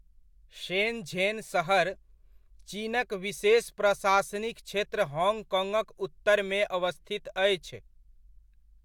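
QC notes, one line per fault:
No faults found in this speech clip. Nothing needs flagging at any point.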